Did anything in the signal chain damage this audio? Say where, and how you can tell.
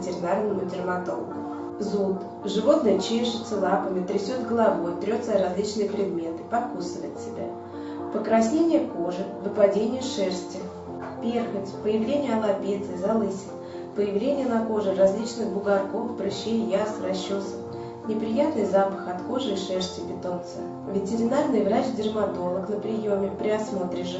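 No, nothing damaged it; the absence of content above 8 kHz is the expected band limit of the Opus call path, and the missing lowest bass is the normal high-pass of the call microphone processing.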